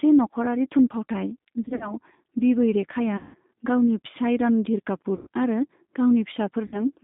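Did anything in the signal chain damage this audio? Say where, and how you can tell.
Yes. At the codec stage, the G.729 codec at 8 kbit/s squeezes the speech into roughly 150 Hz to 3.7 kHz, leaving it plainly rough and synthetic throughout.

On the network, VoIP packet loss concealed by the speech codec hits at 1.63–1.94, 3.17–3.38, 5.16–5.27 and 6.67–6.80 s. Each time, the decoder stretches the last sound into a buzzy tone or coloured noise that fades.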